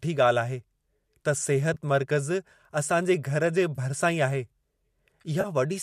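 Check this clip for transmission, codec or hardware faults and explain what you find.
Three brief dropouts from AAC frame loss with concealment occur in this speech, at 1.74 to 1.77 s, 3.76 to 3.79 s and 5.41 to 5.46 s. Each lasts about 20 to 30 ms, which fits losing two or three 10 ms frames of what is likely low-delay AAC. The decoder patches each gap from the last good spectrum, so it sounds like a short smeared, noisy blip. On a spectrogram this appears as a thin vertical band of blurred energy, and on the waveform as a small stretch of slightly irregular texture.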